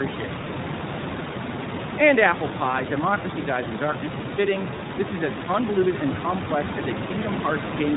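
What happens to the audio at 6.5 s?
At 6.5 s the speech carries the iLBC codec damage that runs through the whole clip. Each 20 ms frame is coded on its own, which fits the 15.2 kbps mode, so the sound is rough and synthetic, with nothing above 4 kHz, unlike a plain low-pass filter.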